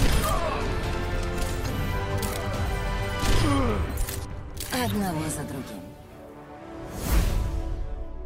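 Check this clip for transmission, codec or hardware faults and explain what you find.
Nothing stood out on listening to this clip.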